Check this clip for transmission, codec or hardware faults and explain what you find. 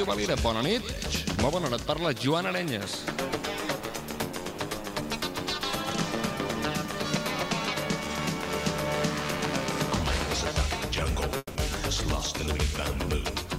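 One fault. From 11.37 to 11.57 s there is a long network dropout, likely. A fading buzz or hiss fills 180 ms, then 20 ms of silence, and the lost audio never returns.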